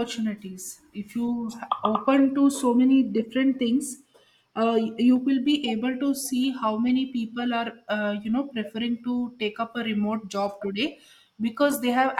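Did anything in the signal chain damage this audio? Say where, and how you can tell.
Yes: a corrupt frame decoded at the codec stage. Brief glitches at 2.17–2.20 s (before "to so many different"), 6.88–6.90 s (after "able to see how") and 11.71–11.74 s, peaking near -20 dBFS, each spanning a few frames. Damaged bits misplaced energy in frequency. Unlike a dropout, foreign sound is added instead.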